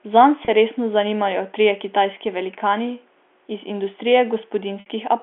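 Telephone-band speech, passing nothing above about 3.4 kHz through G.711, has two gaps covered by packet loss with pitch repetition. At 0.45 s a 30 ms loss sounds like a brief held, buzzy note. At 4.80 s a 60 ms loss, consistent with two lost packets, fades toward silence before the speech cross-fades back. On a spectrogram each gap shows frozen, perfectly flat harmonics, and the waveform shows identical repeated cycles shrinking in amplitude.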